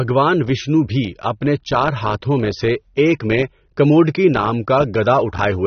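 From start to finish the speech sounds dull and smeared, with nothing above 6.3 kHz and a warbling, fizzy texture on sibilants. That points to likely AAC compression at a low bitrate, near 27 kbps. Unlike a simple low-pass filter, the remaining band itself churns.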